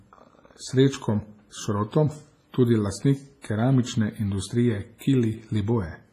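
Throughout, the speech has heavy WMA compression damage, likely from a low-bitrate encode near 24 kbps: washy, ringing hiss, and a spectrogram showing nothing above 15.5 kHz. Pre-echo appears at 3.42 s and 4.98 s, where about 27 and 29 ms of hiss precede attacks, visible as noise smeared ahead of each onset.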